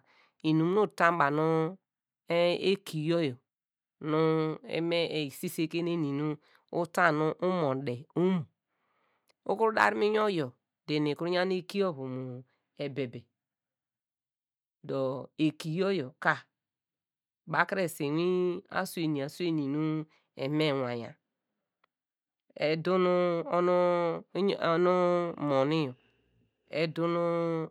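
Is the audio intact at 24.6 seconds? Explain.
Yes, at 24.6 seconds the speech plays through intact, with no dropout, click or other technical fault to be heard at that moment.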